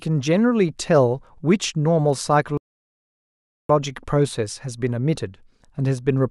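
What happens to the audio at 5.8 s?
At 5.8 s the speech continues cleanly, with no dropout, click, distortion or other fault at that moment.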